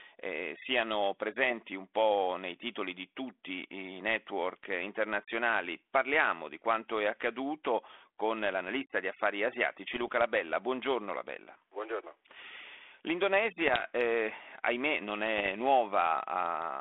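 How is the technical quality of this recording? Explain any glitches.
Three bursts of bit errors on an ADPCM link mar this speech recording, heard through a narrow telephone band of roughly 300 Hz to 3.5 kHz that fits 32 kbit/s G.726.

The bursts fall at 9.94–10.09 s, just after "l'analista di affari asiatici"; at 13.61–13.83 s, just before "eh ahimè non"; and at 15.38–15.51 s, right after it. Flipped bits corrupt the decoder's step size and prediction, so each error rings on briefly. The result is pops, rough crackle and jumpy level. On a waveform these show as jagged spikes and sudden amplitude jumps, and on a spectrogram as short broadband vertical smears.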